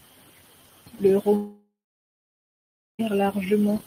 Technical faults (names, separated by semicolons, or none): long network dropout